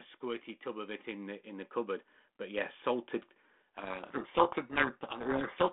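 From 0.21 s to 3.13 s the level climbs steadily by about 8 dB, voice and background swelling together. This is automatic gain rising: the gain control judged the input too quiet and pushed its gain up gradually rather than in a step, so the noise floor lifts along with the speech over nearly three seconds instead of staying put beneath it.

At 3.76 s a codec payload misread sets in and continues to the end of the clip. The sound fits a bit-order disagreement in the G.726 code words. The decoder accepts each sample as valid but takes the bits in the wrong sequence. It reconstructs the wrong prediction differences, and the speech becomes buried in harsh, grinding distortion. Underneath, the telephone band of roughly 200 Hz to 3.5 kHz remains.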